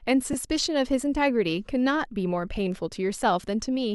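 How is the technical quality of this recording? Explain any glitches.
There is one glitch in the speech, a brief case of lost LE Audio frames at 0.33 s. About 10 ms of audio went missing, which fits a single dropped Bluetooth frame. The LC3 decoder filled the hole by repeating the last spectrum with randomised signs, so the moment sounds like a tiny noisy smear. Unlike a plain dropout, it is neither a silent gap nor a hard click.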